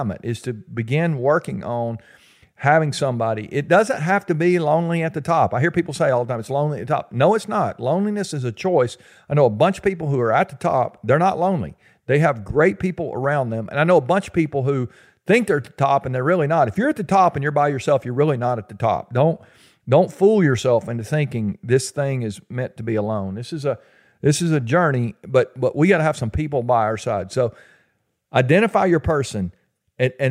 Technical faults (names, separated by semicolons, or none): none